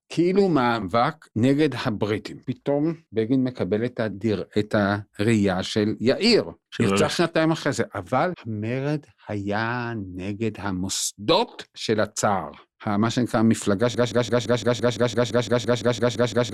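A speech clip that gets stuck at the end: from about 13.95 s it falls into a broken-record loop, the same 0.17 s snippet repeating back to back, roughly fifteen times, right up to the last sample. Whatever speech should have filled those final couple of seconds is simply gone. The most likely cause is a player, encoder or stream stalling and resending the last fragment it had buffered instead of moving on.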